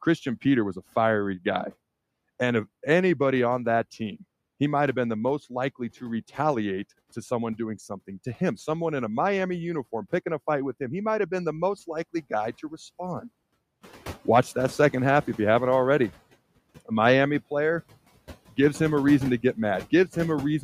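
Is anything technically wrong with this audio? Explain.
Yes. Noise suppressor artifacts run through the whole clip. The background noise drops away in the gaps between words and comes back up underneath them, so the noise floor pumps in step with the speech. A suppressor is working frame by frame, treating the steady background as noise and pulling those bands down by about 19 dB when nothing else is present, then letting them through once speech fills the same frequencies. The effect is most exposed after around 14 s, where the room noise gets about 13 dB louder but still sits about 18 dB below the speech.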